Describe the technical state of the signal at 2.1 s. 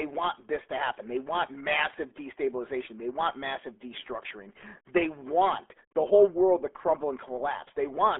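At 2.1 s the speech carries RealAudio 14.4 codec damage, present across the whole clip. Nothing passes above 3.8 kHz, which fits an 8 kbit/s dial-up speech codec. Coarse coding leaves the voice muffled and gargly, with heavy artefacts.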